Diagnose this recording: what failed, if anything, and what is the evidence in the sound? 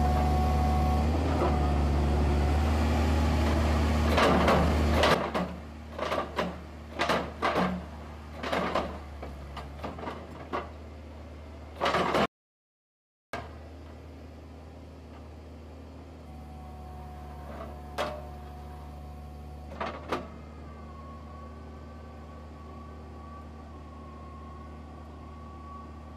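At 12.26 s the sound cuts off abruptly into silence, with no room tone beneath it, and resumes mid-flow at 13.33 s, losing about 1.08 s. This audio dropout to silence likely comes from the input stage, where a lost device or link left the recorder writing silence.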